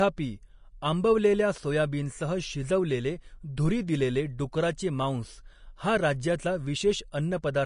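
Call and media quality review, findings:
Vorbis compression, throughout. Nothing above 10.6 kHz; grainy, hissy treble. Likely a low-rate Vorbis encode, fitting about 35 kbps: coarse residue quantisation replaces fine detail with noise.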